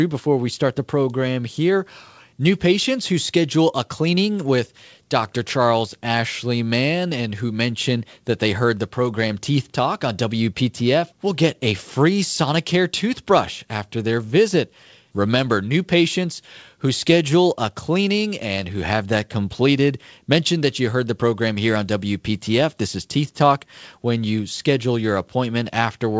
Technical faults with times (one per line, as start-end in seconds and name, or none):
none